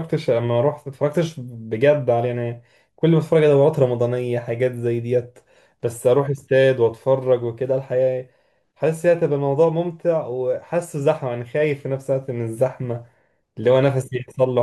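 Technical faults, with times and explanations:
Listening across the whole speech recording turns up no technical fault. There is nothing here to list with a time or an explanation.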